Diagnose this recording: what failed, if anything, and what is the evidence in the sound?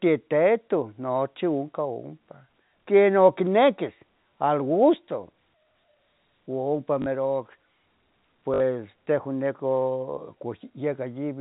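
Network stage: packet loss with last packet repeated. At 7.02 to 7.06 s and 8.54 to 8.60 s, the G.711 telephone-band speech stutters robotically for 40 ms and 60 ms. The receiver replayed the last packet, buzzing at a rate consistent with 20 ms packets.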